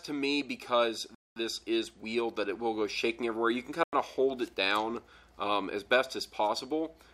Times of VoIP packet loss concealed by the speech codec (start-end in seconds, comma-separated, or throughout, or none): none